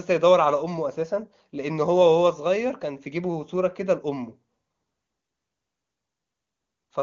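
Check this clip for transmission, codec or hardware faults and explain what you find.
Nothing in this one needs flagging; the speech sounds just as you'd expect over an AMR wideband (HD Voice) link, and its detail suggests the codec is running at or near its top rate.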